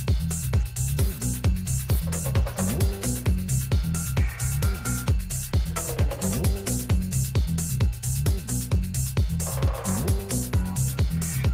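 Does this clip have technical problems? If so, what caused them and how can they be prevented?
No, there are no technical problems to report here.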